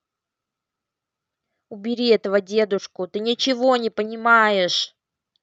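Nothing stood out on listening to this speech, which comes through a call path whose upper range tops out around 8 kHz, as a band-limited call codec would produce.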